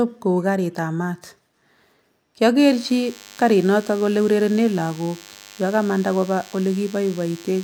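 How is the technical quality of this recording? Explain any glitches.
The recording is degraded by one interference fault. From 2.59 s to the end, a DECT cordless phone buzz sits under the speech at roughly 25 dB below it. A nearby DECT handset or base sends radio bursts every 10 ms. The audio circuitry rectifies them into a thin, steady 100 Hz buzz. On a spectrogram it appears as evenly spaced horizontal harmonic lines. The waveform shows regular 10 ms spikes.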